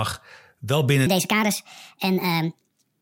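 From 1.07 s to the end, a wrong sample rate makes the speech run 1.5 times faster and about 7 semitones higher, consistent with 32 kHz audio played at 48 kHz. Speed and pitch rise together, unlike a pitch shift or time-stretch.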